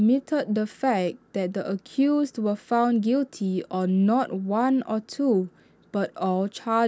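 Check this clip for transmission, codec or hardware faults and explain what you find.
No faults can be heard anywhere in this speech recording. Nothing in the sound points to a problem in how it was captured, carried or decoded.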